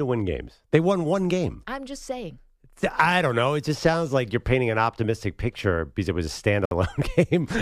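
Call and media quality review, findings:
Gap at a join of encoded pieces, 6.65–6.71 s. Separately encoded speech segments concatenated without trimming encoder start delay and final-frame padding. Result: 61 ms silence cutting into continuous speech, edges smeared by the codec, sound resuming where it stopped.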